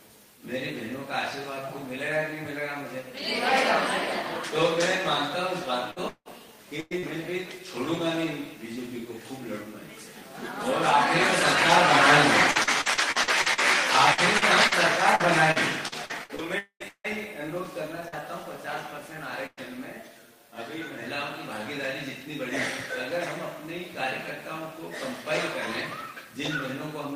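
Two choppy stretches stand out, from 5.91 to 7.05 s and again from 12.51 to 18.14 s, and both sound like repeated packet loss. The first has four holes, the longest 172 ms, and about a third of that span is patched over. The second has nineteen holes, the longest 160 ms, with about 16% concealed. Each time a packet goes missing, the receiver stretches the last bit of sound to cover the gap. The next hole arrives before things settle, which gives that broken texture with pieces missing. Inside the second stretch, from 16.58 to 16.83 s, the sound trails off into a fading buzz or hiss, goes silent for about 80 ms, and comes back further along without the missing part. That's likely a short long network dropout, where nothing arrived for around 220 ms. Then from 19.46 to 19.60 s there's a burst of packet loss, roughly 100 ms gone in one go. The receiver holds and fades the last sound, there's a brief silence of about 20 ms, and the audio resumes past the lost section. 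Right at the tail of that burst, at 19.57 s, a single 20 ms frame was lost but rebuilt from error correction. The following packet carried a low-bitrate copy, so there's no hole there, just a moment that sounds rougher and noisier than what's around it.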